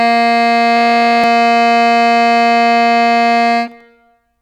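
A system hang loop runs from 0.77 to 1.24 s. The system stalled while a 21.33 ms chunk of the music replayed over and over, producing a steady 46.9 Hz buzz.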